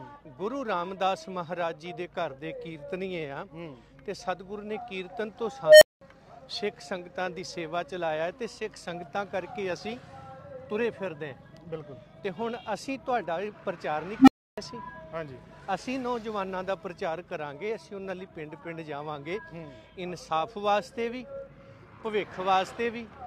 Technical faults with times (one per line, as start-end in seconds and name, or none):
5.65-6.01 unstable filter
14.19-14.58 unstable filter